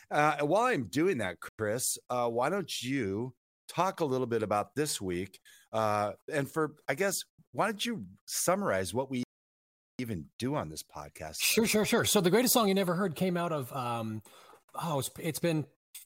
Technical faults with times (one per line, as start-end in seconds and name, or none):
1.49-1.59 Bluetooth stall
9.23-9.99 Bluetooth stall